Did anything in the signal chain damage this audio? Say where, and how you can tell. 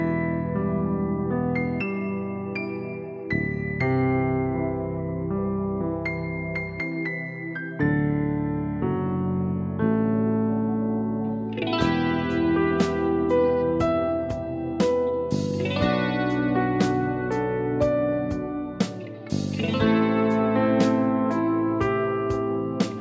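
No, the chain shows no damage at any stage: the only processing audible is a call's microphone path, which band-limits the audio to nothing above 8 kHz and rolls off the lowest bass as intended.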